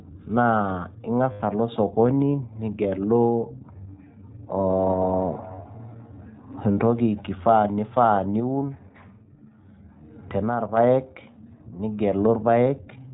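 The speech passes through the iLBC codec, a narrowband VoIP coder that codes each short frame on its own and discards everything above 4 kHz. The damage is plainly audible: a muffled, band-limited sound with a slightly rough, synthetic edge, consistent with the 15.2 kbps, 20 ms frame mode. At 1.32 s, lost iLBC frames leave a hole of about 80 ms, which fits four missing 20 ms frames. The decoder conceals the gap by repeating the last pitch cycle blended with noise, so until 1.42 s the sound becomes a held, faintly buzzy vowel before snapping back almost at once. From 8.4 s to 10.77 s there is a sudden gain jump, likely an unramped digital gain setting or bit shift, in which the level drops abruptly by about 6 dB, taking the speech and background noise down together, and then steps back up at the end.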